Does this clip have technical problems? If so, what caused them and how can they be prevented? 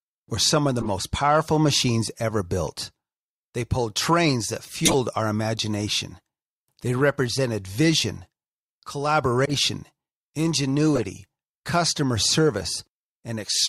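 Yes. Corrupt frames were decoded at 0.79–0.90 s, 4.85–4.94 s, 9.45–9.54 s and 10.95–11.04 s, giving brief chirps and noise bursts. The second burst, after "pulled trains that", is the strongest. Damaged bits misplaced energy across several frames. Error-checked transport with concealment prevents this.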